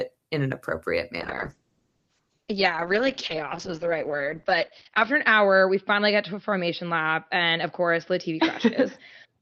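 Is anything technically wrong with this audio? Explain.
Yes. From 1.21 s, just after "in an appropriate", a call bitrate drop lasts to the end. Starved of bits, which fits a fall from about 40 to 8 kbps, the encoder codes coarsely and cuts the band. A spectrogram goes empty above 6 kHz, and the speech turns muffled and watery, worst for about 3.9 s.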